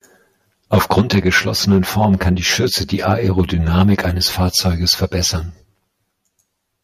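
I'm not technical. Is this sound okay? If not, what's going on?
No, there are three problems in this recording.

Channel delay (comb filtering) runs through the whole clip. One side of the recording arrives roughly 10 milliseconds later than the other, and when the two are mixed together, parts of the voice cancel each other out at regularly spaced pitches. This gives the speech a hollow, slightly tube-like or phasey sound from start to finish.

Microphone overload happens at 0.73 to 1.19 s, 1.69 to 2.32 s, 3.09 to 3.41 s, 3.75 to 3.94 s and 4.4 to 5.03 s. On the loudest parts of the voice, the tops of the sound waves are flattened off, which adds a harsh, crackly edge. This is likely because the microphone's input level was set higher than the equipment could handle, so the peaks ran out of room.

Microphone volume stepped down at about 1.01 s, during the first crackly stretch. The voice and the background both suddenly get a little quieter in one jump. 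The calling software most likely noticed the distortion and turned the microphone down automatically. That wasn't enough to stop it, because the crackle comes back in the later stretches.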